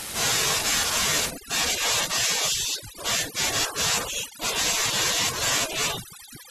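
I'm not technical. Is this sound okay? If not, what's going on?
No. From about 1.3 s to the end, overdone noise removal drops the background noise and breaks it up into twinkling specks.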